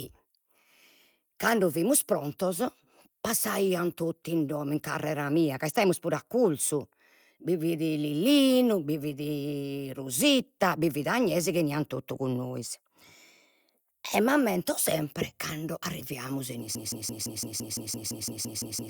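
It's a speech recording with two problems. From 0.46 to 5.93 s there's a call bitrate drop: the audio goes coarse and dull, which fits the encoder falling from 64 kbps to around 28 kbps. Then from 16.75 s to the end, a broken-record loop repeats the same 0.17 s fragment back to back, likely because the stream stalled on its last buffer.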